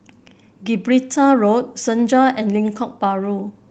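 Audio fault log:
No faults heard in this speech recording.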